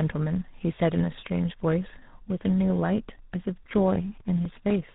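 The call passed through several links in turn, each decoding the speech and re-encoding it with its own codec, so three speech coders worked one after another on progressively degraded audio. That tandem speech coding leaves this speech clip rough, muffled and warbly throughout its length, worse than any single coder would sound. Nothing reaches above 3.8 kHz, and the particular grittiness fits a chain ending in GSM full rate.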